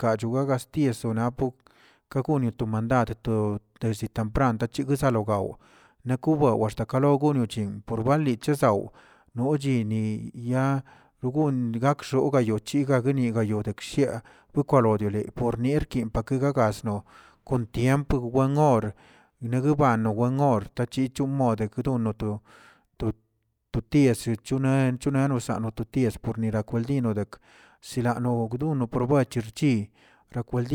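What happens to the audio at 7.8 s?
Nothing goes wrong at 7.8 s: the speech runs on intact through that moment, with no dropout, click or distortion.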